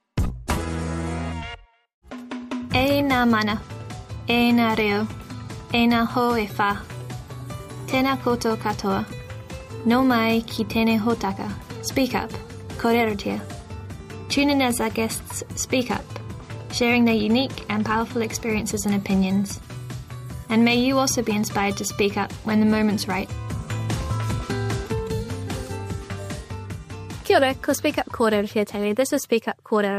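Nothing is technically wrong with this audio.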